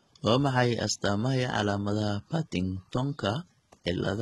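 The speech likely went through heavy HE-AAC compression throughout. Its treble is rebuilt from lower bands and ends near 11.8 kHz, leaving s sounds gritty and metallic.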